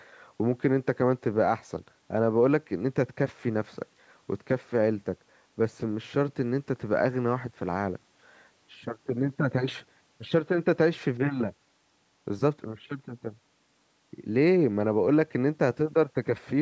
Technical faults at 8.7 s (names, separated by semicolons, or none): none